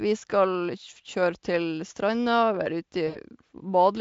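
At 3.07 s the speech breaks up in a burst of VoIP packet loss concealed by the speech codec. About 80 ms of audio went missing, which fits four 20 ms frames, and the decoder filled the gap by extending its last pitch and spectral envelope at falling gain. The result is a short stretched sound, a buzzy tone or coloured noise, that fades, with the voice still weak or distorted until about 3.19 s while the decoder state recovers. The Speex coding itself shows at most faint damage.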